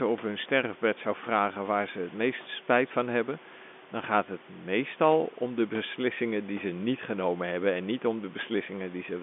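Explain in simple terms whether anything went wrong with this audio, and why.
Nothing went wrong: the speech arrives over an ordinary telephone line with its usual narrow, muffled-top bandwidth and a little background room sound underneath, both expected for a phone call rather than faults.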